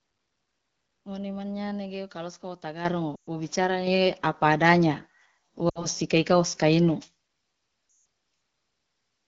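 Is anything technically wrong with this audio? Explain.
Yes, there are two kinds of problem in this speech clip.

The first is the microphone volume being stepped up, twice. At 2.85 s the level jumps by about 9 dB, and at 3.87 s it jumps again by about 6 dB. Each time, the call software seems to have decided the mic was too quiet and bumped the device's input gain in a single step. That's why the voice and the room noise behind it leap up together, with no gradual ramp.

The second is lost AMR speech frames, in three places: 3.15 to 3.29 s, 5.69 to 5.87 s, and 7.89 to 8.05 s. When frames arrive corrupted, the decoder fills the gap by repeating the last good pitch and vocal-tract settings while turning the gain down. The 60 ms, 120 ms and 160 ms gaps each drop to near silence within about two frames, as you'd expect in wideband, and the voice comes back weak and rough for a moment.

The wideband sound itself fits AMR-WB at around 12.65 kbit/s.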